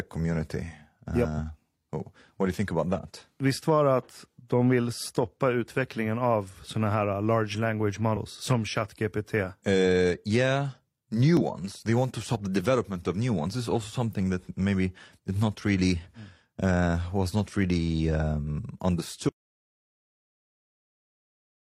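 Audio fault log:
11.37–11.43 s, damaged data in a compressed stream: a brief glitch lasting about 54 ms cuts across the speech. Part of the compressed data there was corrupted, so the decoder misread those frames, lost its place in the stream and had to hunt for the next valid frame header before it could resume. The garbled frames produce the glitch.
19.29 s to end, audio dropout to silence: straight after "was not really um" the speech stops mid-flow and the remaining 2.4 seconds are dead silence, with no room tone or background left underneath. A cut this complete, rather than a fade or a quiet stretch, points to the input signal being lost while recording carried on writing silence, likely through a disconnected device, a broken link or an accidental mute. Whatever followed is not recoverable.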